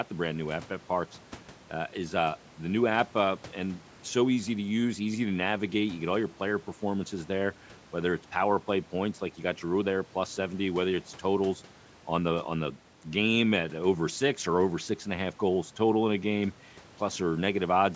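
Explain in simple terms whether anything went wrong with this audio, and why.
Nothing went wrong with this speech recording. It has passed through a call's microphone processing, which trims away the deepest bass and leaves nothing above about 8 kHz, and that is normal for a call.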